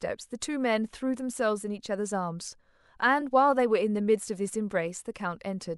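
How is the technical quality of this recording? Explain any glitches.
The speech has one glitch, a case of compressed frames skipped at about 3.2 s. A frame of the encoded stream never reached playback, either because it was missing from the file or because the decoder rejected it as corrupt. The audio jumps forward by roughly one frame, about 30 ms, and the jump fits a 26.1 ms frame length. The join sounds like a sudden jump with a tiny piece of the speech gone.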